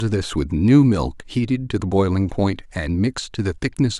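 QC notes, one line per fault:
No technical faults can be heard anywhere in the signal.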